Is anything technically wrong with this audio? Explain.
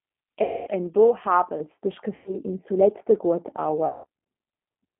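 Yes, there are three problems.

The whole clip has passed through a low-rate speech codec, G.729, and the sound points to its 8 kbit/s form. It rebuilds the speech from a filter model, a pitch predictor and a few pulses, inside a telephone band of roughly 250 Hz to 3.5 kHz. The result is narrow, slightly rough and synthetic speech.

VoIP packet loss concealed by the speech codec occurs three times: 0.43 to 0.69 s, 2.16 to 2.38 s and 3.88 to 4.06 s. The gaps run about 240, 100 and 160 ms, which fits runs of 20 ms packets. In each one the decoder extends its last pitch and filter state while fading the gain. The missing stretch is stretched into a buzzy tone or coloured noise that fades, and the speech sounds weak for a moment after each gap.

From 1.6 s to the end, de-emphasis was applied wrongly. A treble cut meant to reverse a high-frequency boost was applied where no boost existed. The response slopes down to about 11 dB lower at 10 kHz than at 1 kHz, so the remaining speech sounds duller and more muffled.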